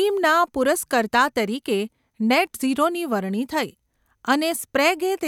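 No technical faults are audible anywhere in the recording.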